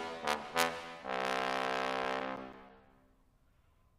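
From 1.71 s to 3.18 s, CD scratch ticks appear: ten brief clicks or micro-dropouts at a steady rate of about six per second, uneven in strength, the longest lasting around 7 ms. A scratch destroys more data than error correction can rebuild, once per disc revolution, so the player interpolates or mutes those samples. A spectrogram shows evenly spaced thin vertical broadband lines. The waveform shows short notches or smoothed spots at the same spacing.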